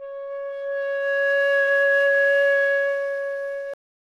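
At 3.74 s the audio hits a cut-off end. The sound is chopped off mid-event rather than finishing naturally, and from there to the end of the clip, roughly the last 0.37 s, there's nothing but flat digital silence. There's no decay or tail at all. What went wrong is that the final stretch of buffers never got written out or played, so the recording just stops dead.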